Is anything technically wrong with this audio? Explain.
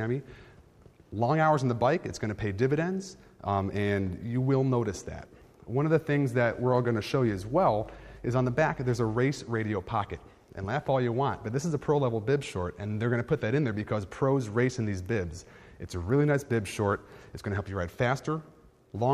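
Yes. From 7.22 to 9.21 s there is mains hum: a steady low tone at 50 Hz sitting roughly 25 dB below the programme. A ground loop or nearby transformer has coupled the power line into the signal path, leaving a constant drone under the audio for those two seconds.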